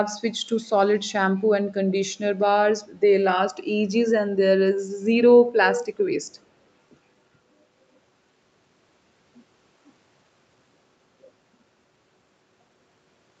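Speech, with two brief bursts of echo leak at 0.63 to 0.72 s and 5.73 to 5.85 s. In each, a copy of the speech returns 365 ms late, likely because a far-end loudspeaker's echo canceller let part of its microphone pickup slip back into the call. The first is very faint; the second is nearly as loud as the direct speech. On a spectrogram the second appears as a ghosted repeat of earlier harmonic striations, shifted 365 ms, beneath the call path's 8 kHz ceiling.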